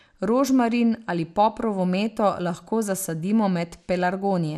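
MP2 compression damage runs through the whole of this speech clip, with nothing above about 14.4 kHz and a plainly audible gurgling, granular texture. The likely cause is MPEG Layer II coding at a low rate, consistent with about 80 kbps, where starved upper sub-bands switch off and flicker.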